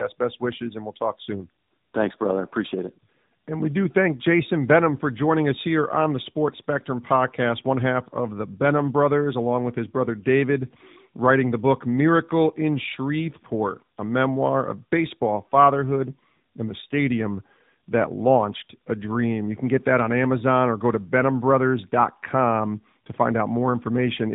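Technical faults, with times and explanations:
Throughout, tandem speech coding: the speech has the sound of two narrowband speech codecs in a row, with a G.711-style 64 kbit/s link between them, which fits AMR-NB at about 12.2 and then 10.2 kbit/s. Each pass decodes, re-encodes and discards detail the previous coder had already degraded. The errors compound into a rougher, more muffled and more warbly texture than either coder alone would give, with nothing above 3.8 kHz.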